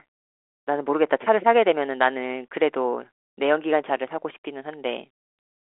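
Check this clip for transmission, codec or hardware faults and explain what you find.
Nothing amiss turns up here: the speech rides a telephone-grade line at 40 kbit/s, with the band spanning 300 Hz to 3.5 kHz and nothing above 3.8 kHz, which is simply how that kind of channel is built to sound.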